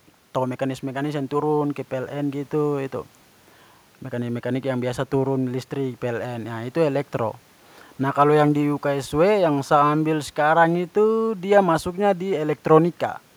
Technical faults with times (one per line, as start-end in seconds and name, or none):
none